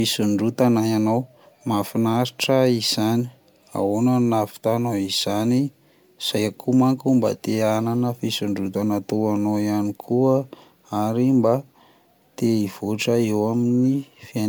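Throughout the speech there is a swirly, hollow quality with smeared consonant attacks and a watery texture, more degraded than a single lossy pass would leave. This is generation loss, likely from re-encoding the audio with MP3 around five times, with each pass quantising again on a shifted frame grid so noise and spectral holes accumulate. The bandwidth still extends to about 20.1 kHz, and the chain is MP3 at 128 kbit/s.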